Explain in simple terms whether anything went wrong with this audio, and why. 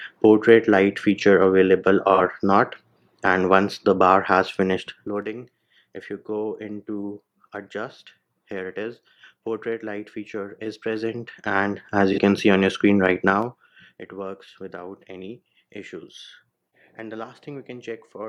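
AAC frame loss with concealment occurs twice, at 2.14 to 2.20 s and 12.13 to 12.18 s. Each time, about 43 ms of audio, which fits a single lost frame, went missing, and the decoder patched the gap from the sound just before it, leaving a brief smeared, hazy blip.

Zipper noise appears while the level drops, from 4.56 to 5.28 s and again from 13.24 to 13.96 s. The volume falls in coarse jumps, about seven a second, rather than gliding down, and each jump adds a tiny click, so a faint ticking rides along with the fade.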